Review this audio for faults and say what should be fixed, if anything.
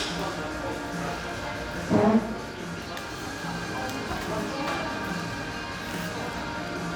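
Nothing stood out on listening to this recording of sounds, so there is nothing to fix.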